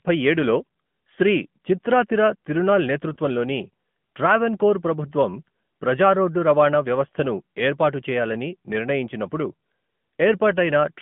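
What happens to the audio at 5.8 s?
At 5.8 s the speech sounds thin, boxy and buzzy, squeezed into a telephone band of roughly 150 Hz to 3.4 kHz with nothing audible above it. That is the AMR narrowband mobile codec, present for the whole clip rather than only at this moment. It rebuilds the voice from a vocal-tract model excited by a few pulses per short frame. The plainly audible synthetic edge points to a higher AMR-NB mode near 10.2 kbps.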